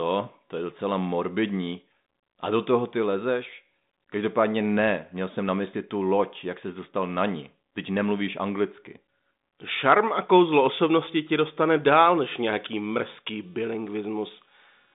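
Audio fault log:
11.95 to 14.94 s, computer activity noise: changing processor or peripheral load shifted the audio circuit's shared ground. Right after "kouzlo osobnosti ti dostane" a buzz of roughly 300 pulses a second appears, about 35 dB below the speech, following the machine's activity rather than the talking.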